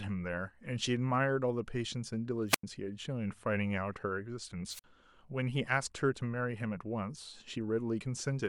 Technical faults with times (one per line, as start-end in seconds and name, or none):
2.48-2.63 wireless microphone squelch dropout
4.69-4.84 wireless microphone squelch dropout